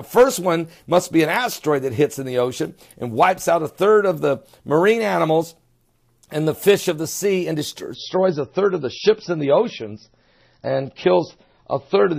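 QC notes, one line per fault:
7.94–12.18 s, adaptive stream at a lower bitrate: at 7.94 s the audio abruptly turns dull and grainy, with nothing above about 5.9 kHz and a swirly, smeared texture in what remains, lasting to the end. There is no gap or dropout at the switch, only a sudden step down in quality. This points to the player moving from a higher-quality MP3 rendition to a much leaner one, around 24 kbit/s, after the connection slowed. At that rate the encoder discards the treble and quantises the rest coarsely.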